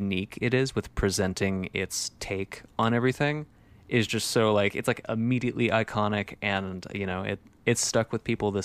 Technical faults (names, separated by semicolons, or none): dropped samples